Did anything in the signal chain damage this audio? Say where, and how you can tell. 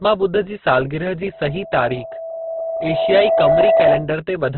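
Yes. Throughout the clip the speech is grainy and rough, with nothing above 4.4 kHz, so it has been squeezed into a narrow band. This is likely heavy Opus compression in its music mode at a rate around 12 kbps. When bits run short, that mode fills bands with folded or noisy content instead of leaving gaps. On a spectrogram there is a hard ceiling at 4.4 kHz, with speckled, noise-like texture where the harmonic structure should be clean.

A loudspeaker feedback squeal runs from 1.32 s to 4.11 s. It is a single tone at 657 Hz that swells over about two seconds until it sits roughly 5 dB above the speech. The fault is in the acoustic path: a microphone is hearing the loudspeaker it feeds, and at 657 Hz the loop gain exceeds one, so that frequency keeps reinforcing itself. On a spectrogram it appears as one bright horizontal line that strengthens over time. The waveform shows a steady sinusoidal envelope growing underneath the speech.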